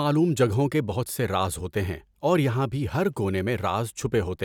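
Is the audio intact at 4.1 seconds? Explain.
Yes, the speech at 4.1 seconds plays through intact, with no dropout, click, distortion or other fault at that point.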